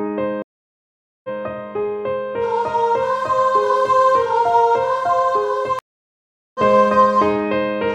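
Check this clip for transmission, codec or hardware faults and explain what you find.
Two stream reconnect events break the clip, at 0.42 to 1.29 s and at 5.79 to 6.60 s. Each time the connection dropped, the player fell silent for about 0.82 s and then 0.76 s, re-established the link and started a new decoder mid-stream. The audio picks up at a later point, skipping roughly 0.7 s of material, so the sound jumps forward rather than continuing where it stopped.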